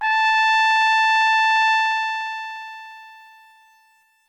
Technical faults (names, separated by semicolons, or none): truncation distortion on a fade